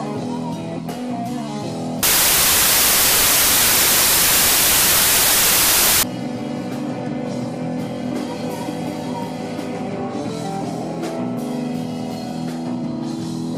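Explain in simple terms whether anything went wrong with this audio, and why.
From 2.03 to 6.03 s the sound turns into loud, harsh hiss: samples built from the wrong bytes. The player misread how each number is stored, so tiny details became huge values. Unlike added background hiss, it comes from the sound itself being scrambled.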